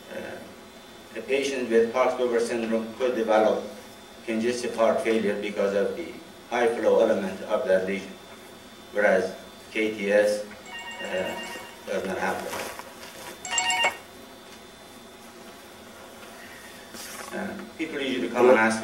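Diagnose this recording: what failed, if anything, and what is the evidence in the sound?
Nothing failed: no stage in the chain, from wiring and conversion through buffering, processing and playback, leaves any audible trace of trouble anywhere in the recording.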